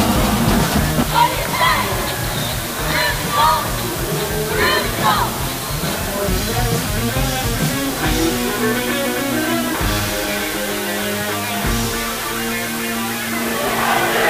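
From start to finish the signal is quantised to a very low bit depth, which fits 4 bits, with dither added before rounding. The error becomes a constant, even white hiss sitting only about 10 dB below the sound, without distortion.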